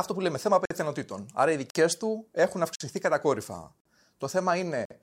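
The speech has a gap between chunks: 50 ms holes at 0.65 s (after "που λέμε θέμα"), 1.70 s (before "του έχουν"), 2.75 s (after "του έχουν"), 3.80 s and 4.85 s. That's once every second, where silence got slipped in at each 1-second chunk join, so nothing's lost but the flow keeps getting interrupted.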